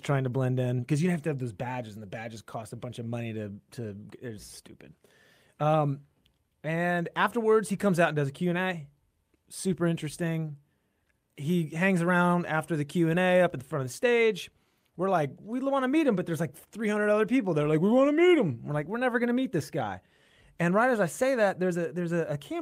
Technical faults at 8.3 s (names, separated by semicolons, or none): none